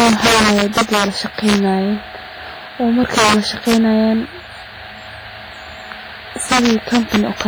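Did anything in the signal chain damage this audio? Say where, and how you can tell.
Yes. Violent cracks, far harsher than clipping, hit loud speech at 0.00–1.04, 1.48–1.56, 3.04–3.34, 3.69–3.74 and 6.52–7.41 s. This is integer overflow in a gain or sample-format stage: peaks about 1 to 7 dB over full scale wrapped to the opposite sign.

Throughout, the speech sounds heavily washy and ringing, with hiss breathing alongside it. The likely cause is WMA compression at the codec stage, where low-bitrate quantisation noise is spread across long transform blocks. The damage fits roughly 24 kbps.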